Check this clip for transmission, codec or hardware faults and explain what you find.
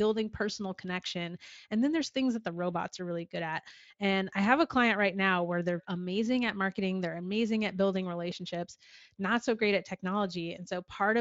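Nothing stood out on listening to this speech recording.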